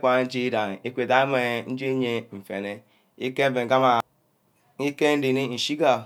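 No technical faults can be heard anywhere in the recording.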